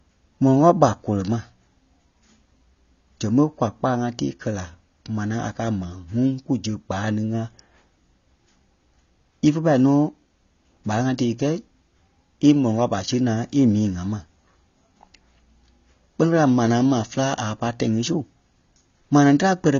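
From start to finish the speech sounds dull and a bit smeared, with nothing above 7 kHz, and there's a warbly, fizzy edge on sibilants and held vowels. That's most likely AAC compression, AAC-LC by the character of it. At a low rate the encoder pulls its cut-off down and starves parts of the spectrum, leaving gaps or noise fill, and the damage here is plainly audible and fits a bitrate around 24 kbps.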